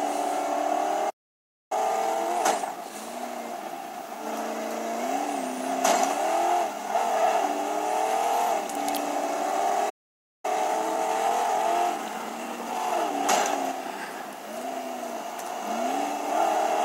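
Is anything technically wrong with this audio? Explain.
Yes. The sound cuts to silence twice in mid-flow, from 1.09 to 1.72 s (about 0.61 s) and from 9.89 to 10.45 s (about 0.54 s), then resumes. These are playback stalls, likely caused by the player running short of data or having its thread blocked until it recovered.

Each gap is followed by time-compressed catch-up. The audio runs hurried at unchanged pitch, at 1.5 times speed from 1.72 to 2.92 s and 1.1 times from 10.45 to 13.45 s, as the player trims its backlog by removing and cross-fading short slices.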